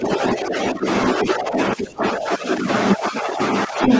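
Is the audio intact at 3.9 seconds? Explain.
No. From 3.83 s to the end of the clip there's other side's voice leaking through: a second voice comes in, sitting a touch louder than the talker. It's likely the far end playing on the talker's loudspeaker and getting picked up by the mic, with the echo canceller failing to strip it out, so that voice rides on top of the local speech right through 3.9 s.

Right inside that stretch, from 3.87 to 3.91 s, you also get speech suppressed in double talk. The talker's level briefly sags by a few dB for around 40 ms. With both voices present at once, the canceller likely couldn't tell the local talker from the echo and turned everything down together, so the talker audibly ducks for an instant just as the other voice is coming through.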